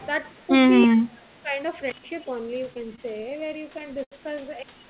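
A speech clip, band-limited at 4 kHz in a way that fits a G.711 mu-law call path, with four distinct faults. At 0.02 to 0.06 s and again at 0.26 to 0.44 s there is an echo leak: a faint copy of the voice trailing by about 327 ms, roughly 35 to 40 dB down, likely from a loudspeaker echo canceller letting residue through. The fixed delay marks it as echo rather than room reverberation. From 0.86 to 1.56 s the voice sinks by up to about 25 dB in patches, likely speech suppressed in double talk as the canceller ducked the talker while the far side spoke. From 1.90 to 2.04 s an intermittent contact opens for about 119 ms, with crackle at both edges and faint hiss in between, a hard mechanical break. From 2.74 to 4.14 s come repeated stalls (stutter): fourteen brief holds, the longest 79 ms and about 209 ms in all, where the last sound is stretched. Nothing is lost, so the speech drags rather than skipping.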